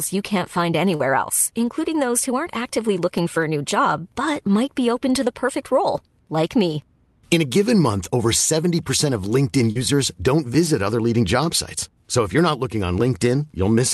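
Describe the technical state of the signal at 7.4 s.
At 7.4 s the speech comes through intact, with no dropout, glitch or other fault, only the ordinary coding character of the call path it travelled through.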